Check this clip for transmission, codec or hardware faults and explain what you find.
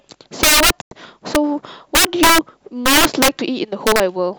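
Yes, there are two faults in this speech clip: repeated integer overflow and one digital broadcast dropout.

Integer overflow: Violent, splintering cracks hit the loudest stretches of speech at 0.43 to 0.70 s, at 1.35 s, 1.95 to 2.38 s, 2.86 to 3.28 s and 3.87 to 4.00 s. These are harsher than ordinary clipping. The signal was driven past the integer ceiling, by about 13, 2, 14, 8 and 3 dB respectively. Instead of being held at the limit, each peak wrapped around to the opposite extreme, so every overshoot becomes a full-scale jump. The worst bursts are the two near 13 to 14 dB.

Digital broadcast dropout: At 0.81 s the sound snaps to silence within about 3 ms and stays muted until 0.92 s, a gap of 96 ms. That length fits three consecutive lost frames. The receiver stopped getting usable data, either from signal loss or failed frame checks, and muted its output until valid frames arrived again. 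Whatever was transmitted during that hole is gone, not concealed.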